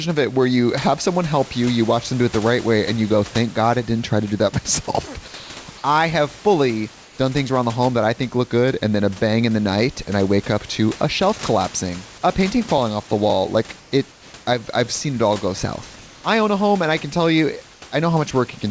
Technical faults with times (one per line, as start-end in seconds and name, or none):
7.04-7.18 comfort noise in place of the background
17.74-17.82 comfort noise in place of the background